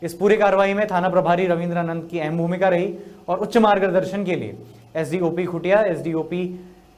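No technical faults are audible.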